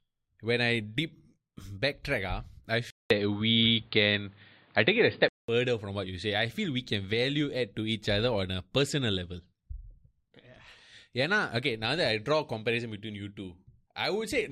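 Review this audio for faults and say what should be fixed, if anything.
From 2.90 to 5.48 s, right after "ah I" and back by "from what you say", the speech goes dull and boxy with nothing above 4.8 kHz, shifts level by a few dB, and picks up a new noise floor around 40 dB down, with a 0.2 s gap at the switch. That's likely an input switched to a poorer device, a different mic or a headset call profile. Lock the input device before recording so the system can't swap it mid-take.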